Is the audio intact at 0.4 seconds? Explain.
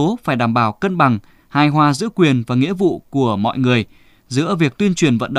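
Yes, the speech at 0.4 seconds plays through cleanly, with no dropout, click, distortion or other fault to be heard at that moment.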